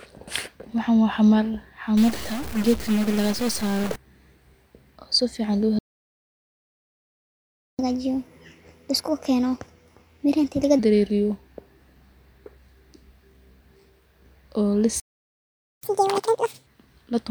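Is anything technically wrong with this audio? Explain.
Yes, three kinds of trouble show up in this speech clip.

Right after "waa xamar", from 1.97 to 3.96 s, there's a stuck bit: distortion riding on the speech, with noise filling the small gaps. That's likely a single data bit jammed at one value, knocking about half the samples off by its weight.

Playback stalls hit at 5.79 to 7.79 s, a full 2-second silence, and again at 15.00 to 15.83 s for about 0.83 s. The sound just cuts out mid-flow, then resumes, likely because the player ran dry of data or its thread got blocked.

Each stall is followed by catch-up at higher speed. From 7.79 to 10.79 s it runs at 1.25x, pitch up around four semitones; from 15.83 to 16.67 s it jumps to 2x, roughly ten semitones higher, as the backlog is resampled to recover lost time.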